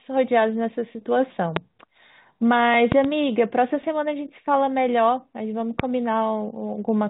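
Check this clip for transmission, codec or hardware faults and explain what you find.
The clip has three loud pops. Loud pops hit at 1.56–1.59 s, a double at 2.92–3.07 s, and 5.80–5.82 s, peaking roughly 15–20 dB above the speech. These sharp thumps, likely from electrical voltage steps, sit over the speech, which continues underneath. The G.711 telephone band is audible too.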